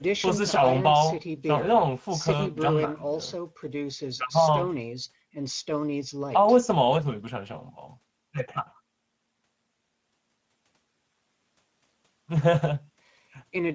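From start to finish, the speech carries Speex codec damage, and it is plainly audible. Speex is a CELP coder. It rebuilds speech from a predicted spectral envelope plus a coded excitation. Here the excitation gets too few bits, so the voiced sound turns grainy and hoarse. The damage fits a middle setting, around 16.8 kbps. Above 4 kHz the sound is a shaped, hissy fill rather than real detail. It stops at 8 kHz, where the call's microphone processing band ends.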